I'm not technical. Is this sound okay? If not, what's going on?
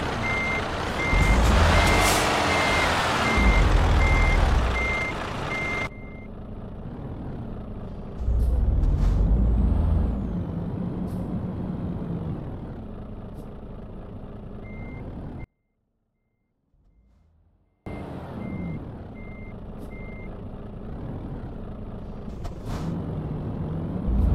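No. From 15.44 to 17.86 s there's an audio dropout to a faint residue: the sound abruptly drops to a faint trace, likely from a brief signal-path interruption.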